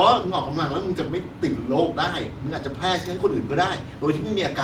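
A short speech recording, and nothing in it is technically wrong.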